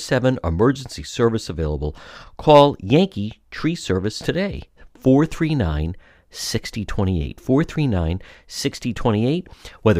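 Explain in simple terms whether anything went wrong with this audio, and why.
Nothing went wrong; I hear no technical faults here.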